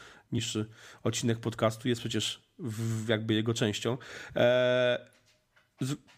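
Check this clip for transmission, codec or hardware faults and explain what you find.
One fault turns up, early in this speech clip.

Damaged data in a compressed stream, 0.37 to 0.39 s: corrupted bytes in the encoded stream make the decoder misread those frames and lose sync until it finds the next valid frame header. That 20 ms stretch comes out as a short, harsh blip.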